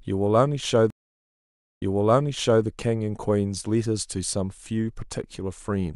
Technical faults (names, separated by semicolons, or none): stream reconnect